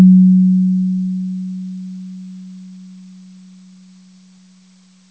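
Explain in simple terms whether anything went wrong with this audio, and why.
Nothing went wrong: the sound came through a normal call connection using the G.722 codec, which keeps everything up to about 8 kHz and leaves out the higher frequencies, just as such calls normally do.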